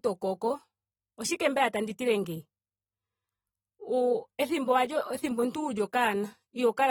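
A speech recording carrying plainly audible AAC compression damage from start to finish, most likely AAC-LC coding at a rate that fits roughly 47 kbps. The lossy coding leaves the sound dull and smeared, since the encoder discards spectral detail it judges masked. On a spectrogram the energy stops abruptly at 19.4 kHz, leaving an empty band above that line for the whole clip, while the waveform itself shows no obvious sign.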